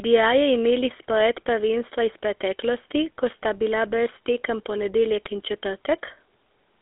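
Throughout, the GSM full-rate codec rebuilds speech from a coarse pulse-driven vocal-tract model, cutting everything above 3.8 kHz and leaving a plainly audible buzzy, gravelly roughness.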